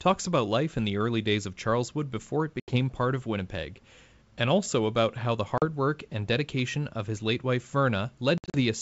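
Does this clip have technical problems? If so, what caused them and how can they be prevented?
Yes, there is packet loss on an ADPCM call at 2.60–2.76 s, 5.58–5.65 s and 8.38–8.57 s. The first two are sharp silent holes, and the third is several shorter ones scattered across its span. All are flat on the waveform and blank vertical stripes on the spectrogram. The speech then returns slightly distorted as the decoder's predictor and step size resync. Forward error correction with concealment that keeps decoder state would prevent it.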